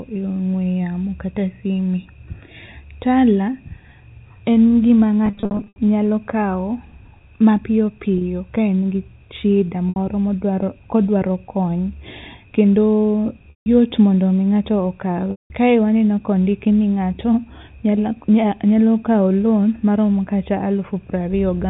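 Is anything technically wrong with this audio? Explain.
Yes. Packet loss with pitch repetition occurs at 5.26–5.78 s, 8.18–8.21 s, 9.89–9.96 s, 13.51–13.66 s and 15.31–15.50 s. The first is a scatter of losses totalling 330 ms over about half a second, with the longest run 80 ms. When packets are missing, the receiver loops the last pitch period and fades it out. Short gaps sound like a brief buzzy hold, and the longer 160–190 ms gaps fade toward silence. A plain dropout would cut straight to silence, with no held tone. The G.711 telephone band stays audible throughout.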